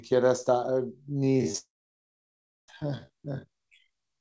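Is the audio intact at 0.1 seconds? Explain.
Yes, at 0.1 s the speech is intact, carried cleanly through the WebRTC call path with its G.722 coding, which leaves nothing above 8 kHz.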